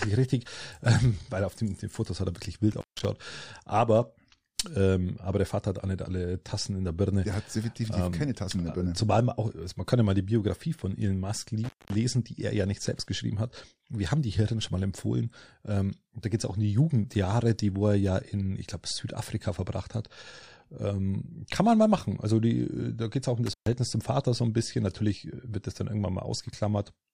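Three times the speech drops out abruptly, with a crackle at each edge and faint hiss in the gap: at 2.71 s, just after "hat er wirklich", for about 0.16 s; at 11.64 s, just before "die er ja nicht", for about 0.21 s; and at 23.46 s, after "geht es auch um", for about 0.13 s. This is intermittent contact: a loose plug or cable briefly breaking the signal path, so the audio vanishes until the connection closes again.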